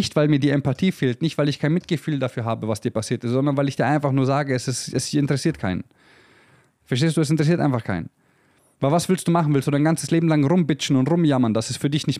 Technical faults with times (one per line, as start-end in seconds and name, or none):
none